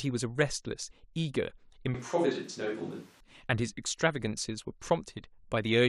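From 1.94 s to 3.20 s the speech turns abruptly roomy and hollow, with thinner bass and audible background noise sitting roughly 30 dB below it, though overall level barely changes. This points to a switch to a distant microphone, likely after the close microphone's feed dropped out.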